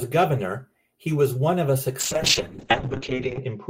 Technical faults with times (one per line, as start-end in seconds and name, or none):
2.00-3.70 call bitrate drop